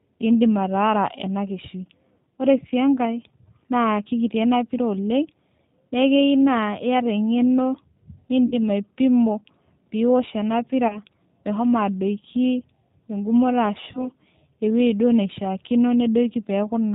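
G.729 codec compression runs through the whole speech clip at 8 kbit/s. Each 10 ms frame is rebuilt from a vocal tract filter, a pitch predictor and a few pulses. The result is plainly rough and synthetic, and nothing above 4 kHz survives.

VoIP packet loss concealed by the speech codec appears at 8.46–8.55 s, 10.88–10.99 s and 13.92–14.07 s. The first gap is about 60 ms, which fits three lost 20 ms packets. The later two are about 20 ms each. The decoder stretches the last pitch and filter into a fading buzzy tone or coloured noise. Because each frame depends on the previous one, the sound stays weak until it recovers.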